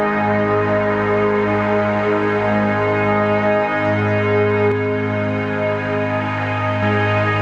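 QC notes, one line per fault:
4.72–6.83 s, channel delay (doubling): one channel runs about 46 ms late, fitting a 2048-sample buffer, so the mono sum plays the music twice as an equal-level slap echo.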